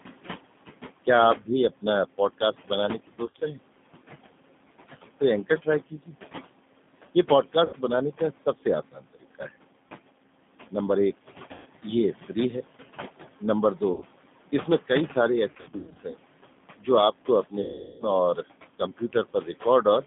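A speech recording carried over a narrowband VoIP line, with three kinds of fault. The G.729 codec is audible throughout. Nothing reaches above about 3.6 kHz or below 150 Hz, so a spectrogram shows a hard ceiling with empty space above it. The voice is rebuilt from a vocal-tract filter, a pitch predictor and a few pulses per frame, which fits an 8 kbit/s G.729A stream. It comes out rough and faintly synthetic, with smeared harmonics rather than clean striations. Noise suppressor artifacts also run throughout. The room noise, about 15 dB below the speech, is pulled down by roughly 17 dB in the gaps between phrases and then swells back under each phrase. On a spectrogram the floor blinks on and off with the speech. The third fault, VoIP packet loss concealed by the speech codec, breaks in at 3.14 to 3.36 s, 7.65 to 7.76 s, 11.54 to 11.67 s, 13.92 to 14.05 s, 15.51 to 15.96 s and 17.62 to 18.05 s. 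These gaps range from 80 ms up to 380 ms of missing audio. The first and fifth are scattered, with runs of up to 40 ms and 100 ms. Each time the decoder stretches its last pitch and filter into a buzzy tone or coloured noise that fades. This shows as a flat, repeated pattern that decays before normal speech recovers.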